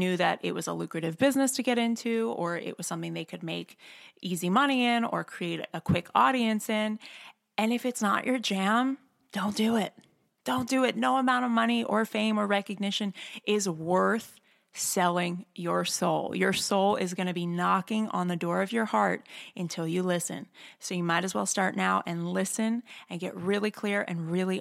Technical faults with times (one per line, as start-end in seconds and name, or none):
none